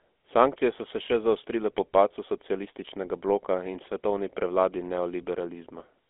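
Speech, passed through the GSM full-rate codec from start to finish. The band runs from 250 Hz to 3.5 kHz, with nothing above 3.7 kHz. A plainly audible buzzy, gravelly roughness comes from coarse pulse-driven excitation, which fits a 13 kbps stream.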